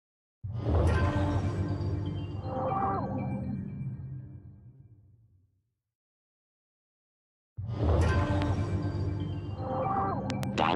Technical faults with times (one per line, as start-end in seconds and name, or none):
4.75-4.83 short stall from a late packet
8.42-8.44 loud pop
10.30-10.45 loud pop